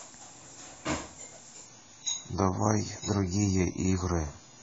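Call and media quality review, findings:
Adaptive stream at a lower bitrate, 1.66 s to end of clip: speech turns abruptly dull, with no gap. Spectrogram shows nothing above 7 kHz from 1.66 s. Waveform stays continuous. The player switched renditions, which fits an AAC drop from 96 to 16 kbit/s.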